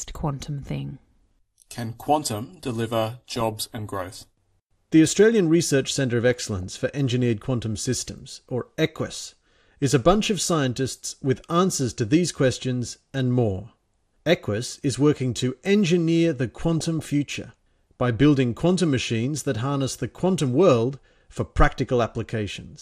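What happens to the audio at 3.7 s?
Just after "quantum deliver", DAB burbling breaks out. It runs from 3.33 to 4.07 s and takes in 3.7 s. Bit errors from weak reception slip past the error correction into the audio data. Corrupted samples put short blips of noise into single sub-bands, and corrupted scale factors make sub-bands jump in level for up to a frame. The result is a bubbling, muddy squelch with brief chirps laid over the speech. The damage spreads across many consecutive frames, which suggests a small but steady error rate.

Underneath lies MP2 compression, present through the whole clip. The encoder splits the sound into 32 sub-bands and rations bits among them. Here the budget is tight, likely around 80 kbps. Upper bands drop out and flicker, and the surviving ones are coarsely quantised. This gives a plainly dull tone with a gurgling, granular edge.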